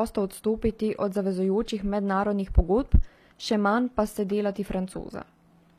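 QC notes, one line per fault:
throughout, HE-AAC compression: treble likely rebuilt by band replication at a rate fitting about 24 kbps, leaving s sounds gritty and lispy, nothing above 14.9 kHz.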